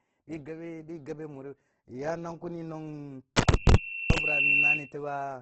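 A speech recording, grainy and rough throughout, with nothing above 8.2 kHz. The texture is likely Opus compression in its music mode at a low rate, around 12 kbps; a spectrogram shows a hard ceiling at 8.2 kHz and noise-filled, speckled bands rather than clean harmonics. From 3.41 to 4.93 s a loudspeaker feedback squeal appears: a single 2.7 kHz tone swells over roughly a second to a few dB above the speech, then stops. On a spectrogram it is one bright horizontal line, and the waveform envelope thickens as it grows.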